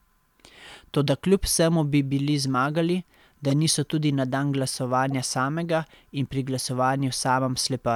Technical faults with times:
3.50-3.52 corrupt frame decoded

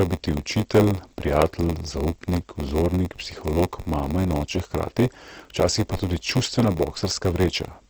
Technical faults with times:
0.00-7.90 Opus compression
0.00-7.90 block size mismatch (padded)

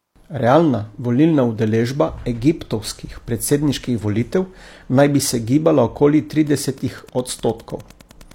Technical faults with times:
6.38-8.35 Wi-Fi interference

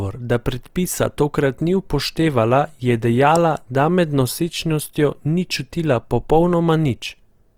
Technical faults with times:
0.00-7.58 Opus compression

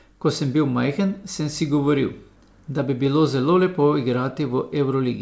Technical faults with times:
none

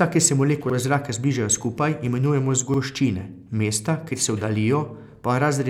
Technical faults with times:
0.70-0.74 repeated buffer
2.74-2.79 repeated buffer

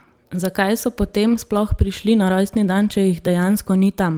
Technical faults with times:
0.35-0.37 lost packet rebuilt from error correction

